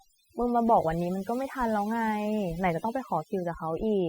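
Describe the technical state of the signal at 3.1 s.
At 3.1 s the speech carries overdone noise removal, present throughout the clip. An overly strong noise reducer pushes frequency bands near its noise estimate down or out entirely. Softer parts of the voice vanish with them. Pauses fall to near silence with twinkling specks.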